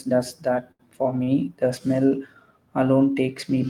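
A packet arriving late emptied the jitter buffer twice, producing a short stall from a late packet each time. From 0.71 to 0.82 s, just after "does that", the receiver stretched the last sound by 80 ms. From 1.23 to 1.30 s, after "does that for", it held another 40 ms. Nothing is lost, but each held sound drags unnaturally with a faint buzzy or dipped quality, and the speech resumes slightly later than before.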